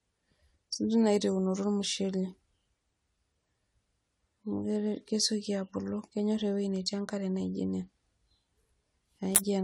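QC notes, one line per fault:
Throughout: generation loss. The speech sounds swirly and hollow with soft, smeared attacks, likely from about five AAC passes around 96 kbit/s stacking up noise; nothing above 19.8 kHz.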